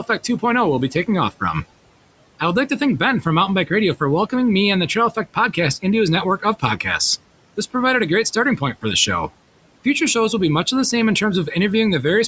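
Throughout the clip, noise suppressor artifacts come from processing that lowers, frame by frame, every band it takes for steady noise, by about 18 dB. The room noise, about 20 dB below the speech, sinks in the pauses and rises again beneath the speech.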